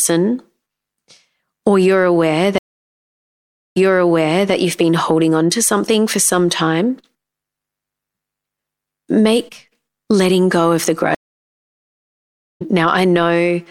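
At 2.58 s the speech cuts to silence for 1.17 s: a stream reconnect. The player restarts its decoder mid-stream. Audio returns about 0.77 s earlier, repeating material. At 11.15 s a second reconnect silences it for 1.45 s. Speech then resumes roughly a second later, skipping material.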